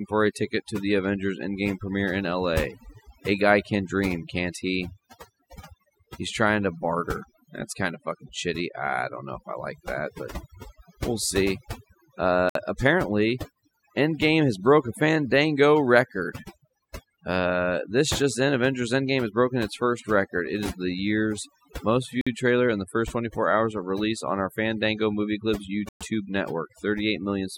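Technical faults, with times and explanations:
Throughout: overdone noise removal. The denoiser's set way too hard, so any frequency band sitting near its noise estimate gets pushed down or switched off, taking the quiet bits of the speech along with it. That leaves a near-silent background dotted with twinkly specks.
12.49–12.55 s, 22.21–22.27 s, 25.89–26.01 s: Bluetooth stall. The audio drops to dead silence for about 59 ms, 53 ms and 118 ms, then carries on, the middle one landing between "is the year's most" and "trailer in the first". Likely the headphone buffer running dry while delayed packets were resent.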